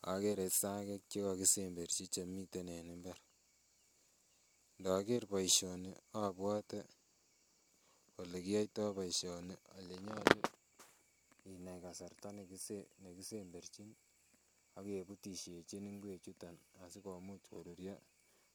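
No technical faults are audible anywhere in the recording.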